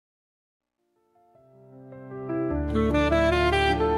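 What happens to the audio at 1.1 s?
At 1.1 s the audio is inside a truncation distortion on a fade. The fault runs from 0.0 to 2.4 s as the level fades in. It is worst from 0.0 to 1.35 s, so 1.1 s falls in the roughest part. The fade stage drops low-order bits without dither. The grit fits a 12-bit word length. Near the smallest step, the waveform collapses into coarse square steps. It sounds gritty.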